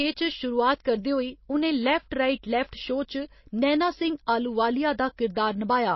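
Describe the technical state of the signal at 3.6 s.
At 3.6 s the speech is dull above a hard ceiling near 5.8 kHz and carries a watery, swirling texture, as it does throughout. That points to MP3 compression at a low bitrate, likely around 24 kbps, with weak frequency lines dropping in and out between frames. A plain low-pass filter would only dull the sound, without that swirl.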